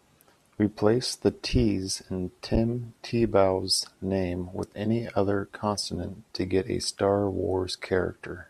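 No technical faults occur in the speech at any point, so there is nothing to describe in time order.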